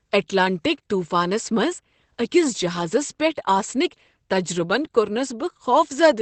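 Speech throughout carries plainly audible Opus voice compression: nothing survives above 8.5 kHz, and the muffled, hoarse, faintly robotic texture points to the SILK linear-prediction coder in wideband mode at around 12 kbps, with the excitation coded coarsely.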